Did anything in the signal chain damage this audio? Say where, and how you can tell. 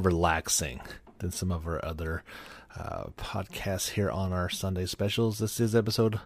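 No, nothing stood out anywhere in this speech recording on listening.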